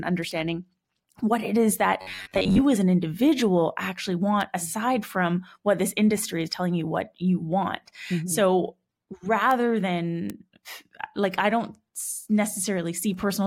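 It's a speech recording with two kinds of trouble. First, four bit error spikes: single sharp ticks at 0.31 s, 4.41 s (between "as an individual actually" and "aside from what this"), 9.51 s and 10.30 s. Each one is a flipped bit throwing a sample, or two or three in a row, way off by a power of two before it snaps straight back, so you get a broadband click that has nothing to do with the speech itself. Second, from 2.02 to 2.62 s, right after "what it is that" and running up to "as an individual actually", the sound goes rigid and metallic with a steady buzz around 93.8 Hz. That's robotic sound from repeated short buffers, most likely caused by audio arriving too slowly while the software keeps replaying the last roughly 10.7 ms chunk. Most of that stretch is repeats rather than fresh audio, and that fixed loop length is what stamps the buzz onto the speech.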